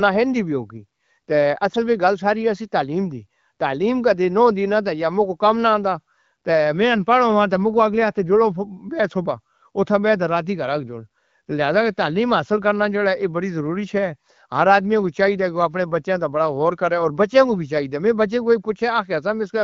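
A speech recording carried over the AMR wideband (HD Voice) codec, with nothing technically wrong to point to at any time.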